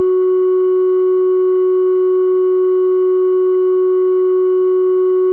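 No technical faults are audible.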